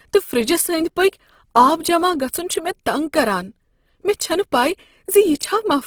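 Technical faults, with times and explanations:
Throughout, Opus compression: the speech sounds rough and grainy, with noise filling the bands. The likely cause is a low-rate encode, fitting 16 kbps.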